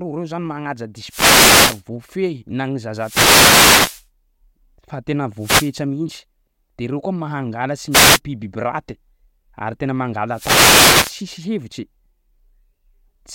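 Speech with five wireless microphone noise hits, heard as bursts of static. They fall at 1.07–1.83 s, 2.96–4.07 s after "na ny", 5.38–5.74 s before "mintsy de reo", 7.90–8.20 s, and 10.31–11.22 s after "ary tena". Reflections cancel the radio signal. Receiver noise then swells over the voice.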